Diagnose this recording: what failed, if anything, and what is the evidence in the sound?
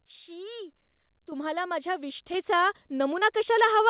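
The whole sound, voice and background together, jumps louder twice: by about 8 dB at 1.32 s and by about 5 dB at 2.34 s. This is microphone volume stepped up in call processing, where gain control raised the device's input level in single jumps.

From 3.20 s to 3.23 s there is a brief discontinuity where the audio carries on rather than moving forward. This is short concealed packet loss: about 20 ms never arrived, and the G.711 decoder extended the preceding sound before blending back.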